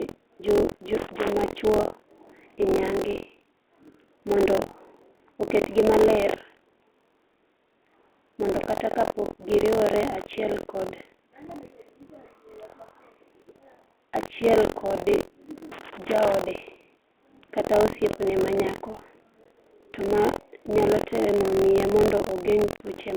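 Buffer tearing runs through the whole clip as a robotic buzz near 43.1 Hz, which fits a 1024-sample buffer whose writer and reader have drifted into each other. In every period roughly a sixth of the audio is stale, from around 70 ms earlier, and it is spliced in with hard edges. The buzz rides on the speech and falls away when the speech stops.

Loose connector crackle appears from 0.97 to 1.31 s and again from 15.72 to 16.34 s. Each time, a bad contact makes and breaks in rapid succession. That chops the signal into an irregular burst of scratchy crackle.

Packet loss on an ADPCM call opens a hard-edged hole from 19.44 to 19.52 s, between "kata osiepne manyako" and "to ma nyalo temo", and a second one from 22.76 to 22.81 s. Roughly 20 ms and 40 ms of audio are lost. After each gap the decoder's predictor and step size no longer match the sender's, so the speech comes back slightly distorted before it settles. 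All of this sits inside the 300 to 3500 Hz telephone band of the G.726 link.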